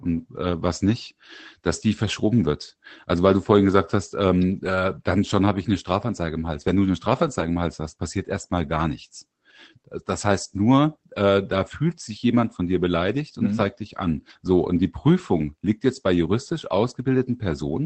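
Between 6.67 and 7.47 s, twelve scattered 20 ms lost packets rebuilt from error correction sound briefly rough and noisy without gaps, showing as smeared, grainier frames on a spectrogram within audio band-limited near 8 kHz.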